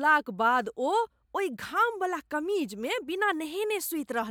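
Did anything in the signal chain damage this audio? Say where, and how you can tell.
No, nothing stood out anywhere in this speech recording on listening.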